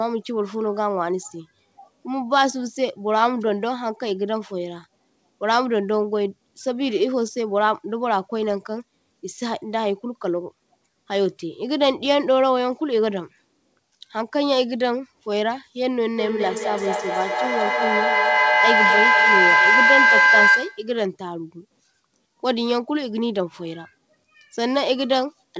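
A speech recording carried over a call link whose sound stops at 8 kHz. From 16.17 to 20.97 s a feedback howl builds near 1.5 kHz, pulsing about every fifth of a second. It peaks about 5 dB above the speech. Two devices in one room form a loop that gains level on each trip.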